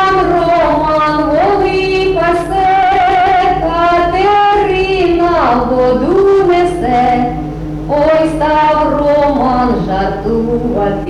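No technical faults are audible.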